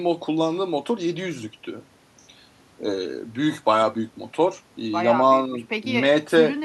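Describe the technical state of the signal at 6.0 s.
At 6.0 s the speech signal is intact, with no audible fault at that moment.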